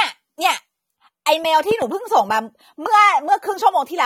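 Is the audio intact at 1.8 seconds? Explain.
No. From 1.71 to 1.84 s there is a loud pop: two sharp pops in quick succession, peaking about 10 dB above the speech, which continues underneath. A sudden voltage step or pulse, likely from a plug, switch, static or driver glitch, was added to the signal.

Across this moment, as throughout the clip, AAC compression is plainly audible. The speech sounds dull and smeared, with a warbling, fizzy texture on sibilants, likely from AAC-LC coding at a low bitrate, about 32 kbps, where a lowered cut-off and spectral holes strip detail.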